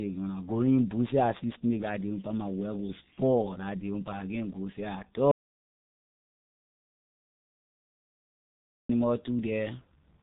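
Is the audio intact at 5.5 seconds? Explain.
No. At 5.5 s the clip is in an audio dropout to silence running from 5.31 to 8.89 s, about 3.6 s, just after "can't go seh at". The input was likely lost while the recorder kept writing silence, so the sound cuts out completely with no room tone. The waveform is a dead-flat line and the spectrogram is an empty band.

Either side of that gap, the speech carries heavy G.723.1 codec damage at 6.3 kbit/s. This low-rate telephony coder discards everything above 3.8 kHz and tracks the voice coarsely in 30 ms frames, so the speech sounds muffled and hoarse with smeared consonants. A spectrogram shows a hard ceiling at 3.8 kHz with nothing above it.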